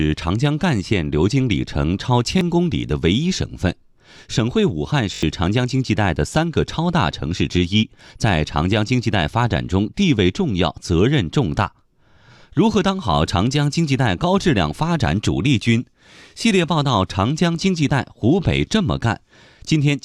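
Repeated buffer at 2.39 to 2.41 s and 5.14 to 5.23 s: late audio made the device replay one 21 ms block, which fits a 1024-sample buffer. It was played twice as a brief stutter first, then five times as a buzzy stutter that loses about a tenth of a second of speech.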